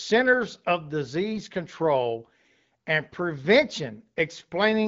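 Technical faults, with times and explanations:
1.32–1.40 s, AMR bit errors: the speech turns briefly hoarse and gargly over about four 20 ms frames as flipped low-priority bits misplace excitation pulses and skew pitch, gain and spectrum values.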